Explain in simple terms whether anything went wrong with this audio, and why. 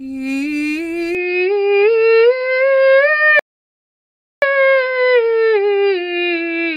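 Two things went wrong. At 1.15 s the recording most likely switched to an input switched to a poorer device, such as a different microphone or a headset's call mode, and it stays on that device to the end. The poorer input can't capture anything above about 5.2 kHz, so from that moment the music loses its sparkle and sounds duller and more boxed-in. There is no gap at the switch and the loudness stays the same, but a faint new background noise comes in underneath.

Later there is a rebuffering stall. At 3.39 s the player ran out of downloaded audio and had to wait for more to arrive. The music cuts to silence until 4.42 s and then carries on exactly where it stopped. None of the music is lost, but the pause adds about 1.03 s to the playback, which is why it sounds like the track briefly froze.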